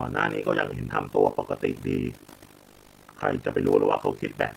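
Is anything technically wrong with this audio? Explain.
Yes. From start to finish, the speech has a rough, buzzy flutter, a robotic tremolo chopping the level up and down around 50 times a second. This is overlap-add ripple. The audio was split into windowed frames and rebuilt with an overlap whose windows do not add up to a steady gain, so the level swings once per frame. Those dips reach about 60 dB deep, nearly silencing the signal each cycle, and the same ripple runs through the room noise sitting about 27 dB below the speech.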